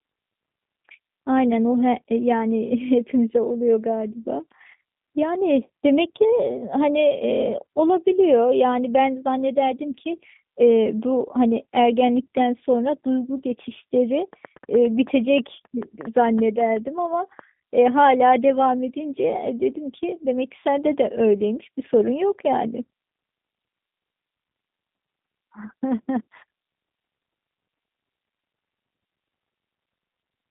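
From start to finish the speech carries the sound of the G.729 codec: a telephone band of roughly 150 Hz to 3.7 kHz with nothing above 3.8 kHz, and a plainly rough, synthetic buzz, which fits 8 kbit/s G.729A. On a spectrogram the energy stops at a hard ceiling.

From 14.33 to 17.40 s a train of clicks ticks over the speech and gaps alike, about fifteen sharp pulses at roughly 5.2 per second with uneven spacing, peaking about 5 dB above the signal. The likely cause is interference or a struggling interface. These appear as thin vertical spikes on the waveform and full-height stripes on a spectrogram.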